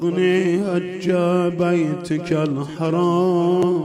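At 3.63 s there is damaged data in the compressed stream: corrupted data makes the decoder misread a frame and hunt for the next header, giving a brief glitch. Unlike a plain digital click, it comes from the decoder losing sync.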